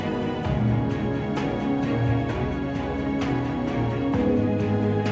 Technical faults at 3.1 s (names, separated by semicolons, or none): none